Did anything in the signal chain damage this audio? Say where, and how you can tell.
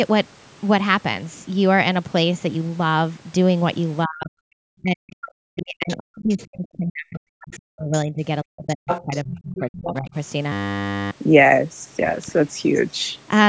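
Yes. In the call processing stage, the echo canceller likely misjudged double talk: speech suppressed in double talk from 4.05 to 8.22 s and again from 8.43 to 10.15 s. Treating the near talker as loudspeaker echo, it pulled the whole signal down, by about 40 dB at the deepest point. The speech dips and drops out in pieces across roughly four seconds in the first stretch and about a second and a half in the second.

The same echo canceller also let the other side's voice leak through. Its adaptive filter likely failed to model the loudspeaker-to-microphone path fully, so a second voice surfaces in brief scraps at 5.89 to 5.96 s and 7.52 to 7.58 s, at about 20 and 25 dB below the speech. It leaks in longer patches at 8.89 to 9.21 s, at about 5 dB below, and at 9.55 to 9.76 s, about 15 dB below, overlapping the second suppression.

At the driver and buffer stage there is a system hang loop from 10.52 to 11.11 s. 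The host stalled while the audio hardware kept replaying its ring buffer, so one 10 ms slice repeats 59 times. That becomes a steady 100 Hz buzz that replaces about half a second of real audio. The loop length points to a buffer of around 10 ms.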